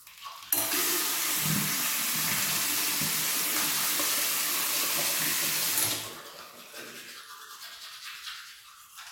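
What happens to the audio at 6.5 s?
Nothing goes wrong at 6.5 s; the sound carries on intact through that moment, with no dropout, click, distortion or glitch.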